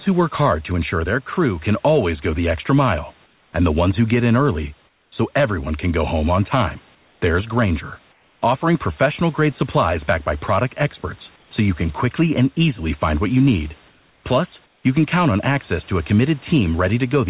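At 3.26–3.53, 4.88–5.12, 6.95–7.22, 8.12–8.42, 11.36–11.51, 13.91–14.24 and 14.66–14.84 s, pauses carry comfort noise in place of the background. The room's textured noise turns into a flat, featureless hiss about 4 to 6 dB quieter, likely from discontinuous transmission. Unlike a dropout, it never goes fully silent.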